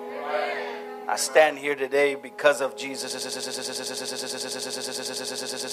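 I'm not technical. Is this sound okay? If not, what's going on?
No. From 3.11 s to the end, a tiny 0.11-second piece repeats over and over: a broken-record loop, likely from the player or stream stalling and replaying its last fragment.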